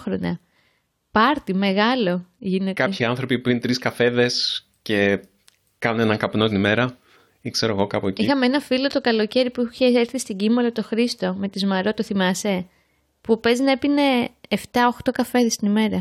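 No technical faults can be heard anywhere in the recording. The speech comes through as one continuous, intact signal.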